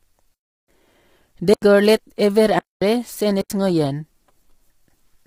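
From the start the speech has a rough, grainy edge, with noise filling the gaps between harmonics and a synthetic-sounding top band. That's likely low-delay AAC compression, AAC-ELD at around 24 kbps, whose short frames can't resolve pitch detail well; at this low bitrate the damage is heavy.

Then come four blocks of digital silence, each cutting out and back in with no fade: 0.34 to 0.68 s (about 341 ms), 1.54 to 1.62 s (85 ms), 2.59 to 2.82 s (227 ms), and 3.41 to 3.50 s (85 ms). Most likely the output buffer wasn't filled in time. The 85 ms holes fit 4096-sample blocks at 48 kHz.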